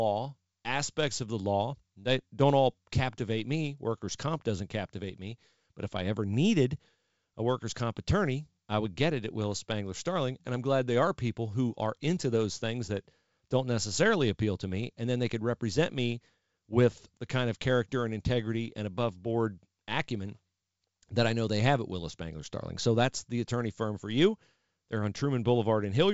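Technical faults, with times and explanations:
The speech carries the band limit of G.722 wideband telephone coding at 64 kbit/s, with nothing above 7.7 kHz, and no technical fault can be heard.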